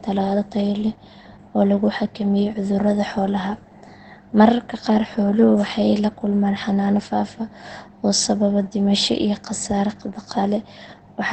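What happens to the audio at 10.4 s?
At 10.4 s the speech sounds muffled and hoarse, with nothing above about 8.7 kHz, as it does throughout the clip. The likely cause is heavy Opus compression, whose narrowed band and speech-mode coding fit a very low bitrate near 12 kbps.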